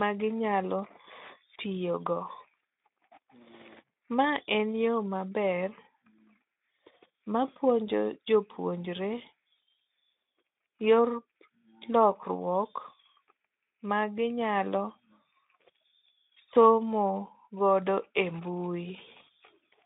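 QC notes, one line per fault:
No faults heard in this speech recording.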